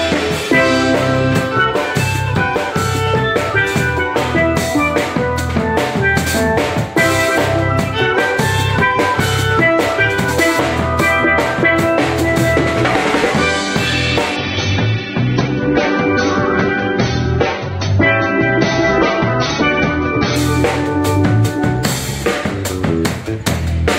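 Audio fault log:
14.36–20.36 s adaptive stream at a lower bitrate: treble suddenly cuts off above 6.3 kHz with thicker codec artefacts but no gap, unlike a dropout; suggests about 24 kbit/s.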